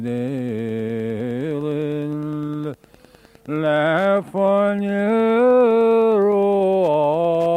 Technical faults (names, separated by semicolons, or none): Wi-Fi interference